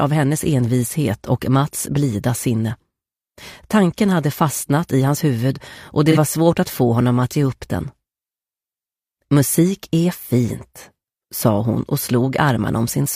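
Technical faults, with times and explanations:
6.11–6.18 s, AAC frame loss with concealment: a brief smeared, phasey patch. The decoder patched a gap of about 43 ms, likely one lost frame, from the preceding spectrum.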